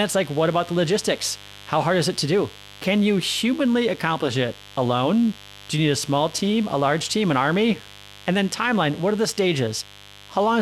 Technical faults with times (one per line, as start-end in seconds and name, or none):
0.00-10.61 mains buzz